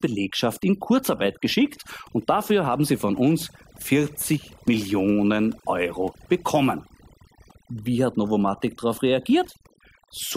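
Throughout, the background drops with twinkling specks: overdone noise removal, aggressively suppressing bands near its estimated noise floor.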